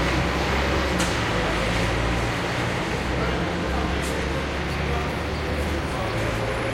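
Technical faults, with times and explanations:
No technical faults can be heard in this audio, so there are no times or explanations to give.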